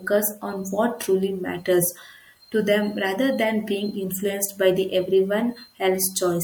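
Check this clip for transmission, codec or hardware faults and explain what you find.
One codec-level fault is present in the speech. At 3.88 to 3.90 s, a repeated frame occurs: a 24 ms block is played one extra time, which fits a single compressed frame being sent twice. The decoder replays it, adding 24 ms and producing a brief stutter. Unlike a dropout, nothing is missing. The sound doubles rather than falling silent.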